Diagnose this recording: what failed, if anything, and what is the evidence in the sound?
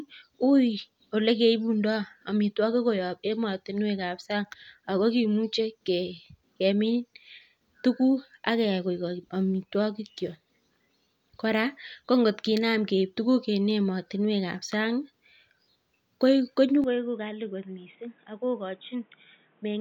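At 16.84 s the speech turns abruptly dull and boxy and stays that way to the end of the clip at 19.80 s. Nothing reaches above 3.8 kHz, the level falls by about 10 dB, and a new background noise sits roughly 30 dB below the signal, with no silence at the switch. This is likely an input switched to a poorer device at the driver level. A codec bandwidth drop would narrow the band but wouldn't bring a simultaneous level step and a different noise floor.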